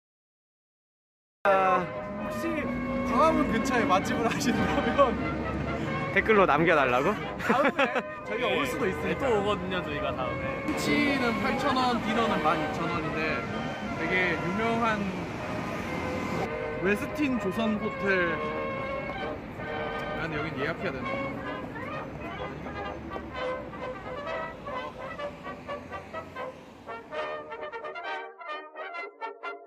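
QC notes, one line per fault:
0.00–1.45 s, cut-off start: capture or streaming began late, so nothing was recorded for the first 1.45 s and the clip opens on digital silence. At 1.45 s the audio switches straight in partway through a sound that was already under way, with no natural attack or fade-in. The sound arrives already at full level, as though its opening had been sliced off, and the transition from dead silence into it is abrupt.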